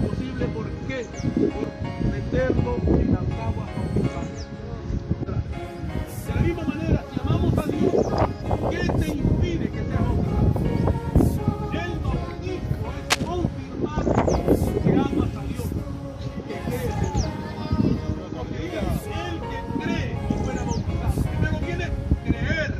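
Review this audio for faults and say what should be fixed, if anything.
There is one fault, a burst of cable scratch noise from 13.09 to 13.28 s. For about 0.18 s a dense, uneven scratching sits over the audio, roughly as loud as the sound itself. This is likely a worn cable, connector or control carrying a DC voltage being moved. Its contact resistance jumps rapidly, and those jumps reach the signal as ragged noise. That section should be repaired or replaced. To prevent it, replace or clean worn cables, connectors and controls, and keep them still while recording.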